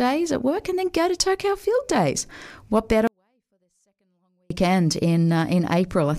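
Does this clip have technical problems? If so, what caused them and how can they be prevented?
Yes. From 3.07 to 4.50 s, a 24-bit alignment error reads low-byte 24-bit samples as 32-bit integers, dropping the speech about 48 dB. The waveform collapses to a near-flat line and the spectrogram darkens sharply. To prevent it, declare the container's alignment explicitly so 24-bit data is read with the same packing it was written with.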